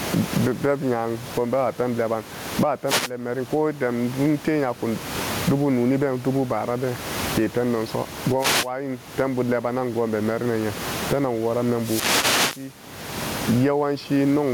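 Gain pumping runs through the whole recording: the room noise sits about 30 dB under the speech, and the gain swings by around 30 dB. Likely the input gain was set way too hot, with a fast limiter clamping it down.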